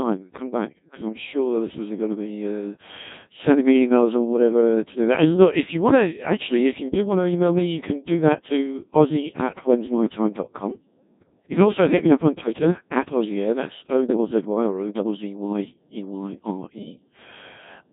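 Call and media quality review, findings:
Robotic, buzzy speech throughout, heavily mangled, with nothing above 3.8 kHz. Probable component: Codec 2 vocoder, likely a 1.6 kbit/s mode. Only pitch, voicing, energy and spectral envelope sent; decoder rebuilds speech from sine waves, so the original waveform is lost.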